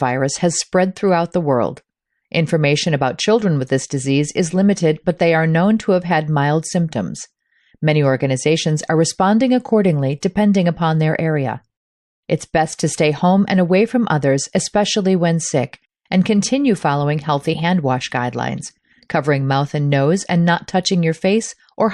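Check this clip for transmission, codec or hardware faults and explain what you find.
One codec fault is present, a single pre-echo. Pre-echo occurs at 10.20 to 10.23 s, between "organizations are responding accordingly" and "depending upon their area". The codec spread quantisation noise across a transform window that sounds like about 36 ms, and it never switched to short blocks. Noise scaled for the sharp onset therefore filled the quiet gap ahead of it, rising about 21 dB over 22 ms. The result is a brief hiss just before the attack, which sounds smeared and softened.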